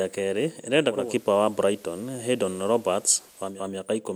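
Just after "kerĩ ĩrenda", at 0.88 s, the speech shows digital radio blending to analogue: a 287 ms cross-fade to the FM copy brings hiss roughly 30 dB down and a level change of about 3 dB, until the return at 3.65 s. Unlike a dropout, the sound never stops.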